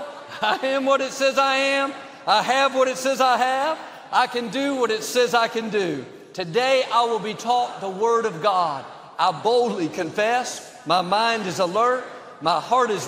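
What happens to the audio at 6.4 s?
Nothing goes wrong at 6.4 s: the audio plays through that moment intact, with no dropout, click, distortion or other fault to be heard.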